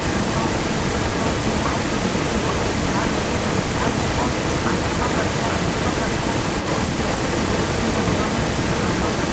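Right from the start and running the whole way through, there's a second, complete copy of the speech sitting about a second behind the first, and it's roughly as loud as the original. It's full-band within the clip's 8 kHz ceiling, with no decay or room colour, so it sounds like a clean overlay rather than a reflection. That's a doubled audio track, likely a second capture through a slower path or an out-of-step edit.

Layered on top, also from the very beginning to the end, is a shorter repeat trailing the speech by about 248 ms, a few dB below it. That's an echo leak: likely the far end is on a loudspeaker, its echo canceller didn't fully scrub what its mic picked up, and the leftover got sent back down the line, so you hear the speech coming round again a quarter-second late.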